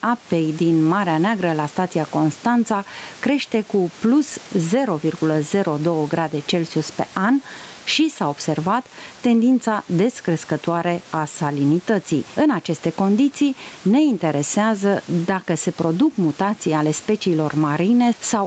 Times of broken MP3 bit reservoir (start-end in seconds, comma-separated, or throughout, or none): none